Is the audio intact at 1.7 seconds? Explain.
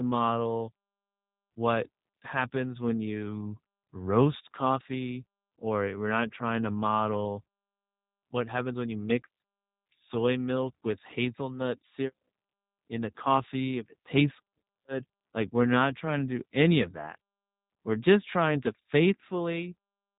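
No. Throughout the clip, 1.7 s included, the speech has passed through the G.729 codec, which rebuilds it from a vocal-tract filter, a pitch predictor and a few pulses, consistent with 8 kbit/s. Nothing above 3.8 kHz survives, and the voice sounds audibly rough and synthetic.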